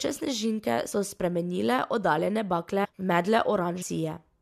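Brief smeared blips at 0.91 s, just before "spremenile oddaljene", at 2.84 to 2.86 s, right after "spremenile oddaljene", and at 3.81 s mark where the speech lurches forward by about 50, 400 and 200 ms. These are compressed frames skipped: whole frames never got decoded, and jumps sized in multiples of roughly 23 ms fit the codec's frame length.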